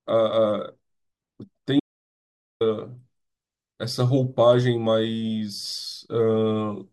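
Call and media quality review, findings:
Audio dropout to silence, 1.80 to 2.61 s. Speech cuts off mid-flow, then about 0.81 s of silence, no room tone. Input path likely lost, through device disconnect, link failure or mute. Recorder kept writing silence. Speech in gap unrecoverable.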